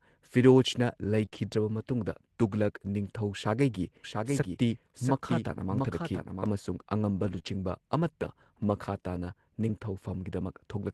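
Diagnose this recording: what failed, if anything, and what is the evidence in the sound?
Network stage: lost packets rebuilt from error correction at 1.21–1.23, 1.34–1.36, 5.85–5.87, 7.19–7.37, 7.46–7.48 and 8.76–8.78 s. Low-bitrate copies play instead, sounding rougher and noisier.

Network stage again: short concealed packet loss at 1.25–1.34 and 7.39–7.46 s. Packets arrived too late. The decoder stretched the preceding speech, leaving brief smears and wobbles.

Doubled audio track, 4.04–6.46 s. The speech repeats about 0.7 s late, about 5 dB quieter, dry and abruptly gated. The likely cause is a second capture path or an editing error.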